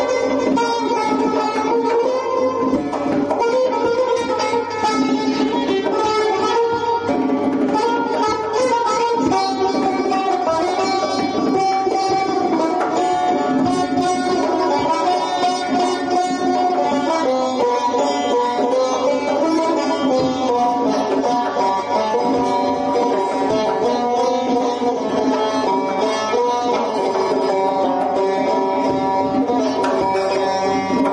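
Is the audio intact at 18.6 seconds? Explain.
No, at 18.6 s you're still hearing the gain pumping that runs through the whole clip. The gain swings by around 10 dB, pulled down on each loud sound, so loud and soft parts sit closer in level and the sound is squashed, likely from input gain set far too hot with a fast limiter clamping down.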